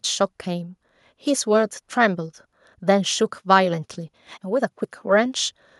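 No technical faults detected.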